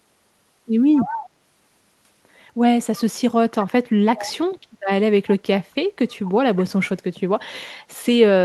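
A speech clip with two bursts of echo leak. From 0.94 to 1.3 s, a delayed copy of the voice trails the original by about 231 ms, roughly 10 dB quieter. A shorter scrap returns from 4.17 to 4.31 s at the same delay, fainter, around 15 dB down. The likely cause is a far-end loudspeaker feeding its microphone, with the echo canceller letting part of that pickup slip back into the call.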